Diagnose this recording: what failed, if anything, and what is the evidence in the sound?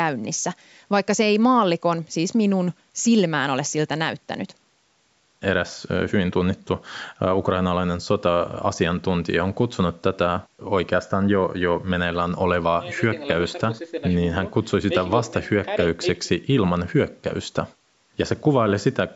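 Nothing failed; the speech carries no audible faults.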